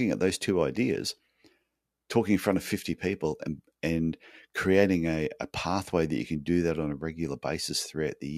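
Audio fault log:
1.10–1.18 s, DAB burbling: just after "at those two", the speech carries short blips of noise. Residual bit errors from weak reception corrupt MP2 samples and scale factors, so single sub-bands jump in level for up to a frame. A spectrogram shows bright, blocky narrow-band patches; the waveform shows brief irregular bursts.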